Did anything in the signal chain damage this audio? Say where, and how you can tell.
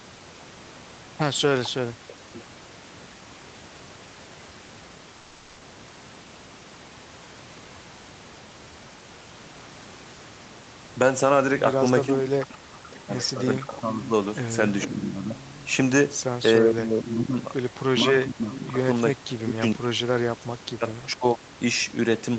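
Yes, at the codec: from 5.17 to 5.61 s, featureless noise about 2 dB quieter is comfort noise in place of the background, likely from DTX.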